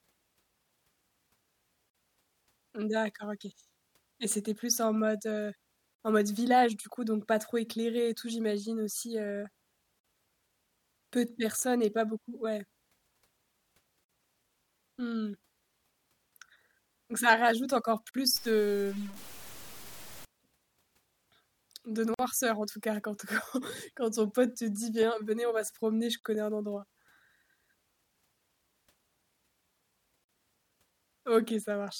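This is speech, cut by brief dropouts of about 49 ms at 1.90, 5.95, 10.00 (after "tout j'imagine aussi heu"), 14.04, 18.09, 22.14, 26.19 (between "va se promener je" and "connais un endroit") and 30.24 s. The pattern of one gap every 4 s marks a gap at a join of encoded pieces, where each separately encoded piece's start delay and end padding were left in. From 18.36 to 20.25 s, just after "ça rajoute encore", the sound turns gritty and grainy, with distortion roughly 20 dB below the signal. This is likely low bit depth without dither, consistent with truncation to about 7 bits.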